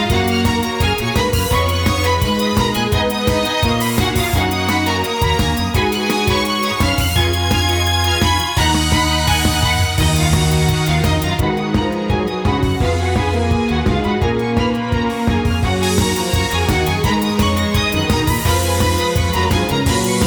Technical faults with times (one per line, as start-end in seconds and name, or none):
11.40-15.83 de-emphasis applied wrongly